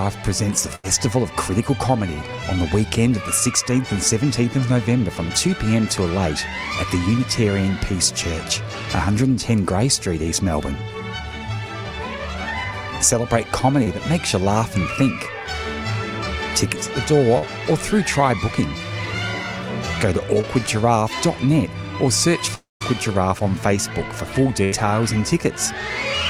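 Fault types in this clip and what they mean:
Burst of packet loss: at 0.75 s and 24.64 s, about 80 ms goes missing; the last sound is stretched and faded, then the audio resumes past the gap.
Short concealed packet loss: at 13.84, 17.38 and 20.41 s, 20 to 40 ms is patched by continuing the preceding sound, heard as a brief smear or wobble.
Long network dropout: from 22.55 to 22.82 s, a fading continuation gives way to about 170 ms of silence, likely a dropout losing roughly a quarter second.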